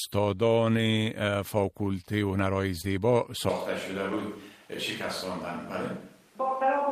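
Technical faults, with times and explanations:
2.81–2.85 s, short concealed packet loss: about 20 ms of audio failed to arrive at the decoder in time, and the receiver filled roughly 19 ms of it by extending the preceding sound, following its pitch where it was voiced and using shaped noise where it was not, before crossfading back to real audio. The result is a brief smear or wobble, and a very short consonant in that spot can drop out.
2.83–2.85 s, lost packet rebuilt from error correction: overlapping the end of that concealed stretch, about 20 ms was replaced with a low-bitrate backup copy carried inside the following packet, which points to a single lost packet. Because the decoder had this copy, it played it and left no gap. The replacement is coarser and noisier than the surrounding audio, which adds a grainy edge to the same moment.
3.49 s to the end, switch to a distant microphone: from this point the sound abruptly turns roomy and hollow. 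The bass thins, the level falls by about 5 dB, and background room noise rises to around 30 dB below the speech. The close microphone's feed most likely dropped out and a microphone further from the source took over. The new sound does not switch back before the clip ends.
4.11–4.21 s, lost packet rebuilt from error correction: about 60 ms, spread over three separate 20 ms packets, was reconstructed from the low-bitrate redundant copies carried in each following packet. There is no dropout, but in those rebuilt moments the audio turns rougher and noisier.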